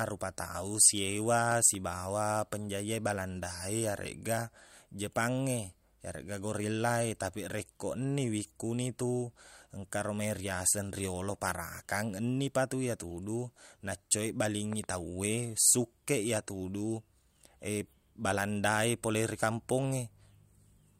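A loud pop strikes at 1.52 to 1.77 s and again at 14.73 to 14.86 s, just after "parakang ennipatu iyatudu naccoeq". Each is a double thump roughly ten decibels above the speech, which continues underneath, likely a voltage spike from a switch, plug or static discharge.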